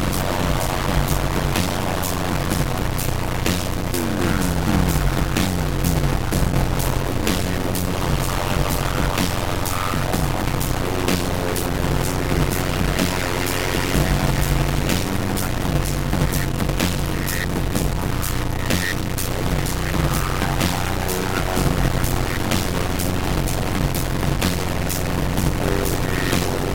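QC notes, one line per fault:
Throughout, stuck bit: a distortion rides on everything, and the quiet stretches are never silent but fill with a constant gritty noise. This is likely one data bit held permanently at 0 or 1 by a broken line or converter. Roughly half the sample values land off by that bit's weight in a waveform-dependent pattern, and near zero the bit flips meaning with the sign of the signal, so pauses turn into noise.
Throughout, block size mismatch (padded): a steady buzz at 91.9 Hz sits under the audio, which plays back at 0.533 times its normal speed while staying at roughly its normal pitch. One stage is writing shorter blocks than the next stage reads, and the remainder of each block is padded with zeros. The 0.533 ratio fits 256-sample writes into 480-sample reads. Each padded block inserts a short gap, and those gaps repeat at the block rate to form the buzz.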